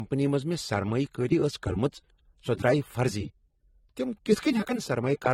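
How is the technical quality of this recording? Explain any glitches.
The speech has a layered, smeary coding quality from start to finish, and nothing comes through above about 16.9 kHz. It sounds like transcoding between lossy codecs: one codec's artefacts were re-encoded by a second, which had to spend its limited bits describing that earlier damage and then added its own. The texture fits an MP3 at around 56 kbit/s followed by AAC-LC at around 32 kbit/s, which would likely explain the stacked swirl and the 16.9 kHz ceiling carried through the chain.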